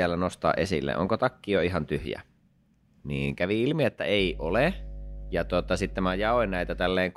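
A ground loop or a nearby transformer lets the 50 Hz power line leak into the signal path, and from 4.20 s to 6.92 s, right after "kävi ilmi että", the result is mains hum. A steady low drone at 50 Hz, with some low harmonics above it, sits under the speech at roughly 10 dB below it, continuing as a constant buzz until it stops at 6.92 s.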